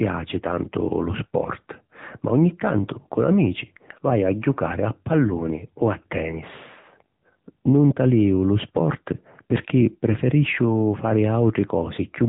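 From start to finish the speech carries AMR narrowband mobile codec damage: a buzzy, synthetic tone consistent with a low bitrate near 8 kbps, and a spectrogram showing nothing above 4 kHz.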